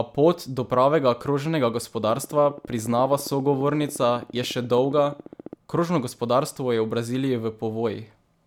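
From 2.04 to 5.54 s, steady ticking at 14.6 per second sits about as loud as the speech: a train of clicks, likely from electrical interference.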